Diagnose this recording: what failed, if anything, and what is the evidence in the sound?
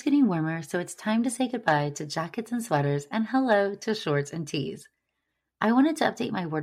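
Nothing failed in this speech recording. No stage of the chain leaves any trace in the sound.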